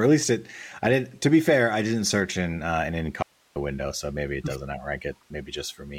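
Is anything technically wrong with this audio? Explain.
Yes. From 3.23 to 3.56 s, after "search in uh an", the speech abruptly vanishes for about a third of a second, leaving only faint hiss well below speaking level, then snaps back at "window so maybe it". This audio dropout to a faint residue likely comes from a brief signal loss while the downstream path stayed live.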